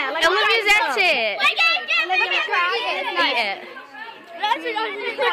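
Nothing here calls for comment, since the audio runs along without a single glitch, dropout or odd artefact catching the ear at any point.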